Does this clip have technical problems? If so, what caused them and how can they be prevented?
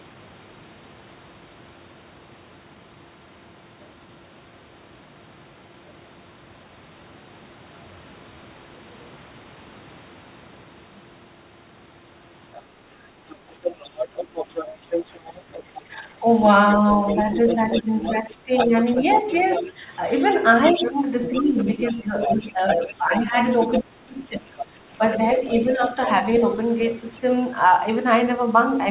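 Yes. First, the other side's voice leaking through: a second talker creeps in as a tiny blip at 12.56 to 12.62 s, then properly from 13.3 to 15.81 s, 16.71 to 23.79 s, 24.59 to 24.86 s and 25.63 to 26.14 s. At its loudest it's only a little under the main talker, and elsewhere it's clearly quieter. The likely cause is the talker's loudspeaker, playing the far end, bleeding back into the mic, with the echo canceller not removing all of it. To prevent it, get the talker on a headset, or turn the speaker down and tune the canceller properly.

Second, speech suppressed in double talk: the main voice ducks at 15.91 to 16.26 s, again across 17.78 to 19.8 s, and hardest between 20.72 and 26.09 s, where it drops by around 25 dB in patches totalling about two seconds. Each dip lines up with the other side talking at the same moment, so it's likely the canceller couldn't separate the two and turned both down. 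A headset fixes this too, or use a canceller with better double-talk handling.

The top end stops at 4 kHz, which fits a G.711 narrowband call path. That's the codec's normal band limit, not a fault.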